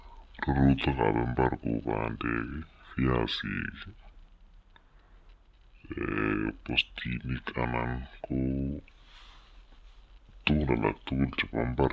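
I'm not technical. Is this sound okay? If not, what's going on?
No, the whole clip has a wrong sample rate problem. It plays at about two-thirds speed, so the speech is slow and roughly seven semitones too deep. That fits audio recorded at 24 kHz but played back as if it were 16 kHz.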